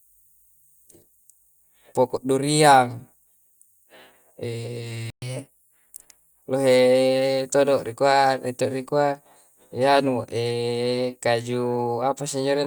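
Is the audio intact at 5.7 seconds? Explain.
No, catch-up at higher speed runs from 5.22 to 6.42 s. After a stall, the player resamples its backlog to play it 1.1 times faster, so the speech briefly hurries and rises about one and a half semitones in pitch, then settles back.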